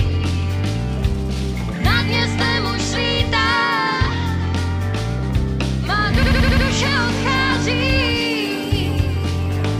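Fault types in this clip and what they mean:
System hang loop: the machine stalled while the sound hardware kept cycling one ring buffer, so from 6.23 to 6.66 s a single 85 ms chunk repeats five times. That's a machine-gun stutter at 11.7 Hz, which fits a 4096-sample buffer, with next to nothing lost.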